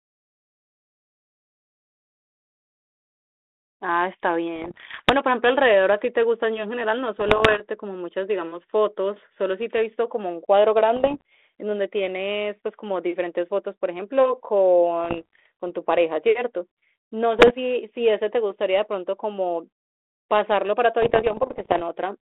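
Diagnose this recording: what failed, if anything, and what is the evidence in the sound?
The ADPCM transmission link suffered bit errors. Pops and rough bursts with brief level jumps occur at 4.56–5.11, 7.20–7.61, 10.96–11.22, 15.04–15.46, 17.39–17.51 and 21.02–21.83 s. Flipped bits, up to about one percent, derail the decoder's step size and predictor. Each error rings on briefly.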